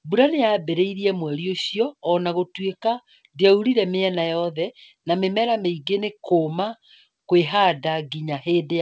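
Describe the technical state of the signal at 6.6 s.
At 6.6 s the speech is intact, with no dropout, glitch or distortion, only the normal band limit of a wideband call path, with nothing above 8 kHz.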